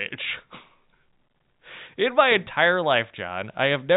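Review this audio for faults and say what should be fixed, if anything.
No faults; nothing needs fixing.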